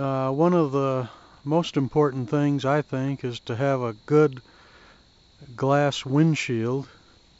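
No technical faults are audible.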